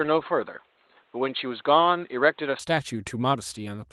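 From the start until 2.59 s the speech is narrowband, with nothing above about 4.2 kHz, so it sounds dull and boxy. It then opens up to full bandwidth with no gap and no change in loudness. The likely cause is an input switched to a poorer device, since the dull stretch also carries its own faint background noise, roughly 40 dB below the speech. That fixed band edge and separate noise floor set it apart from the lightly coded 24 kbps fullband Opus stream, which narrows with bitrate rather than switching cleanly.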